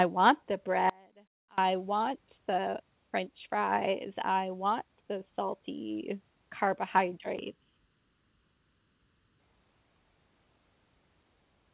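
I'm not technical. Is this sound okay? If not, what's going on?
No. From 0.90 to 1.58 s there is an audio dropout to a faint residue: the signal was likely lost somewhere in the chain for about two-thirds of a second while the line stayed open. Right after "want the", the sound suddenly drops to a faint trace, then returns with "want the french fries".

From 7.39 to 9.40 s there is a channel delay causing comb filtering. One side of the audio arrives a fraction of a millisecond late and gets blended with the other, cancelling certain pitches starting around 700 Hz. That stretch sounds hollow and phasey. The call-style audio path, which stops at 4 kHz, gives the rest its telephone-like tone.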